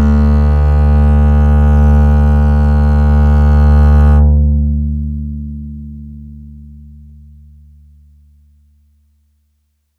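No technical faults are audible.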